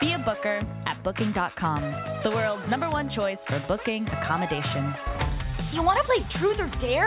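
No faults detected; the audio has passed through a telephone-style call path whose band stops at 4 kHz, which fits a narrowband G.711 mu-law link.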